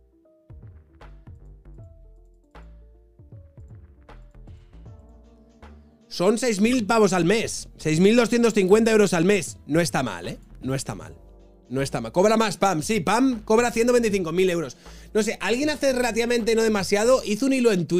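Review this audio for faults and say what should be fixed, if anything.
At 6.71 to 6.76 s there's a short burst, about 54 ms, poking up to around -20 dBFS. That's a corrupt frame decoded: bits in the compressed stream got flipped, and the decoder played the damaged frames anyway. Misread gains and codes dumped energy at the wrong frequencies for a span that fits roughly three frames. To prevent it, add checksums or error detection on the transport and have the decoder conceal bad frames instead of playing them.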